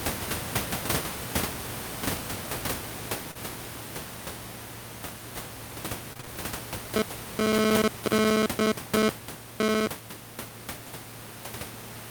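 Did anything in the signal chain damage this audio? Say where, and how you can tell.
Yes. Around 3.31 to 3.37 s there's short concealed packet loss on the network side: roughly 40 ms never arrived, and the decoder smeared the last sound across the hole.

From 6.13 to 6.29 s it's repeated packet loss with a robotic sound. Four quick gaps, the longest 24 ms, leave about half that stretch patched, so it turns choppy.

From 6.96 to 9.87 s there's GSM phone buzz in the analogue wiring. It's a raspy 217 Hz buzz about 12 dB under the speech that comes and goes as a nearby phone's data bursts get rectified.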